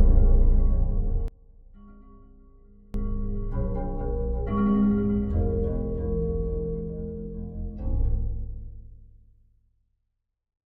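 Everyday sounds, with an abrupt drop of about 26 dB from 1.28 to 2.94 s that leaves only a faint residue, likely from one channel inverted, so the shared content cancels when the channels are summed. A waveform shows a sudden narrow band; a spectrogram fades.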